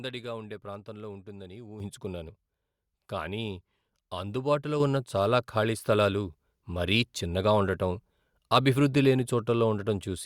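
At 1.8 s and again at 4.8 s the microphone volume is stepped up, raising the input gain abruptly by about 9 dB and then about 6 dB. Speech and background noise jump louder together at each point, as the device's input level was increased.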